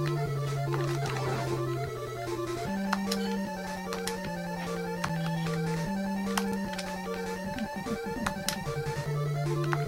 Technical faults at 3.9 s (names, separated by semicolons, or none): block of digital silence